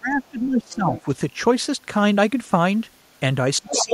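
Speech opens with a stretch of speech suppressed in double talk, from 0.00 to 1.08 s. The talker's level sags in pieces, dropping by about 20 dB at its deepest. It happens again from 3.59 s to the end at 3.93 s. The likely cause is an echo canceller that heard both sides at once. It could not split the talker from the loudspeaker echo, so it pulled everything down.

The other side's voice leaking through comes in short scraps at 0.59 to 0.75 s and 0.96 to 1.02 s, sitting about 20 dB under the talker. From 3.69 s to the end it returns far stronger, at about the same level as the talker. The other party is played on the talker's loudspeaker and reaches the microphone. The echo canceller likely failed to remove it fully, so it passes through alongside the talker.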